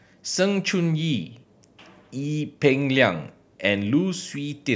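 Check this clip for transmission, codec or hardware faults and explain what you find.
No faults detected here.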